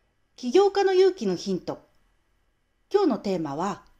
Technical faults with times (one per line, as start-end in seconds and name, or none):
0.10-3.90 clock slip clicks